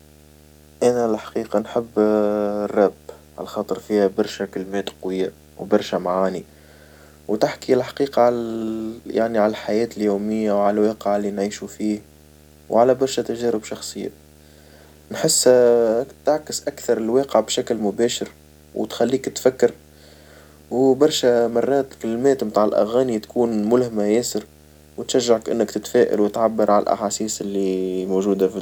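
It's a speech recording with video or display buzz running through the whole thing: a steady 75 Hz buzz plus hash on top, roughly 30 dB under the voice. That's a screen or video cable leaking its field rate into the audio path.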